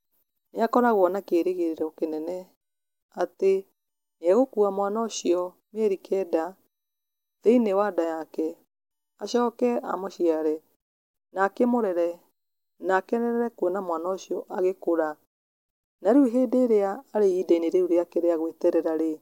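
A speech recording with no technical faults audible anywhere in the signal.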